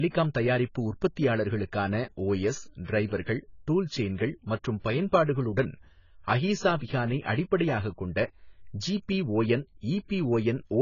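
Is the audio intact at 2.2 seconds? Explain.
No, at 2.2 seconds the speech sounds dull and smeared, with a fizzy, warbling edge on sibilants and nothing above 7 kHz. This runs through the whole clip and is likely heavy AAC compression, at a bitrate around 16 kbps, lowering the cut-off.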